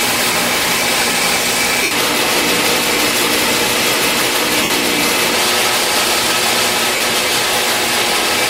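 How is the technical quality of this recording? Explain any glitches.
The recording has four short dropouts from lost LE Audio frames, at 0.33, 1.83 to 1.91, 4.63 to 4.70 and 6.96 to 7.01 s. They last about 23, 75, 68 and 45 ms. The LC3 decoder filled each gap by reusing the last spectrum with random signs, then fading it. Tones become a brief noisy smear.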